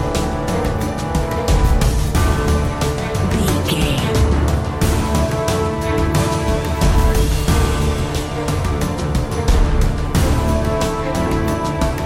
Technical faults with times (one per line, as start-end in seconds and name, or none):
none